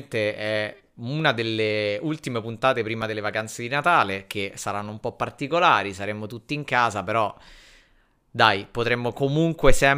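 Speech, with a block of digital silence at 3.02 s, between "una delle ultime puntate" and "delle vacanze di". About 1.45 ms of audio drops to silence and returns with no fade, so it is heard as a tick. The length fits a 64-sample output buffer that was likely not filled in time.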